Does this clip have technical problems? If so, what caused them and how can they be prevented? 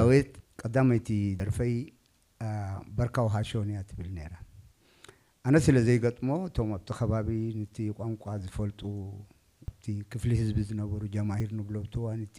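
Yes. At 1.4 s, 9.68 s and 11.4 s there is an abrupt jump forward, with no gap of silence. The likely cause is a dropped buffer (overrun): the capture program fell behind, the hardware overwrote unread samples, and the audio on either side was spliced together. Each skip is about 40 ms, except at 9.68 s, where roughly a tenth of a second goes missing. Unlike an underrun, nothing is inserted. To prevent it, use larger capture buffers and give the recording thread higher priority.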